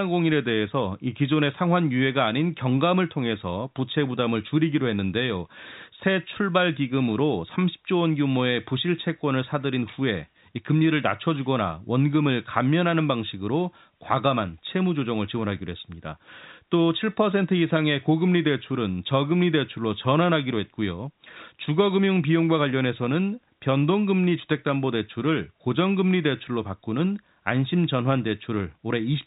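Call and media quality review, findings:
No faults found.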